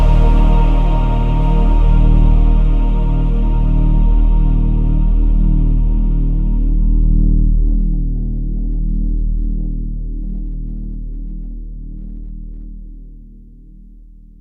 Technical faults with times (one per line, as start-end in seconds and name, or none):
none